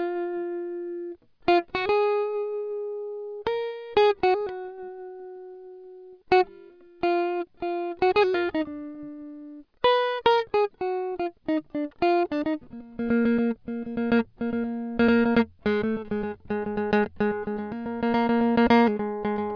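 No technical faults are audible anywhere in the music.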